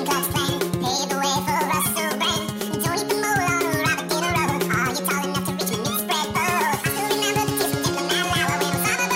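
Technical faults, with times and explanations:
Throughout, wrong sample rate: the sound runs at twice its proper speed and exactly one octave (12 semitones) higher, both shifting together, which fits 24 kHz audio played at 48 kHz.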